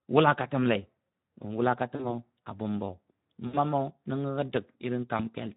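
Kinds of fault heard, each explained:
Speex codec: The whole clip is coded with Speex, a CELP speech codec from older VoIP and game chat. Its damage is plainly audible. Too few bits reach the excitation, so the speech sounds hoarse and noisy, which fits a low setting near 11 kbps.
VoIP packet loss concealed by the speech codec: Three gaps, about 40, 60 and 20 ms long, are filled by the decoder. It repeats its last pitch and filter at falling gain, giving a short buzzy or noisy, fading smear. The speech stays weak briefly as it recovers.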